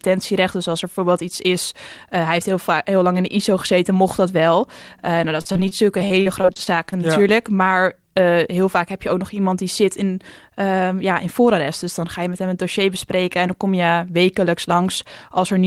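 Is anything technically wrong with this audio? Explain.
Yes. Repeated packet loss (robotic sound) runs from 5.41 to 6.94 s: speech packets went missing again and again, each hole patched by extending the preceding sound, with holes up to 37 ms. About 20% of that stretch is concealed, giving choppy, broken-up speech.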